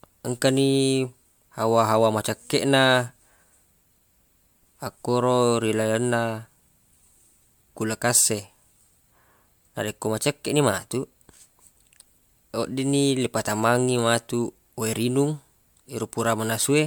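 Generation loss, likely from about five successive MP3 re-encodes near 140 kbit/s, stacks quantisation noise throughout the speech, leaving it swirly, hollow and smeared, with blurred attacks and nothing above 20.1 kHz.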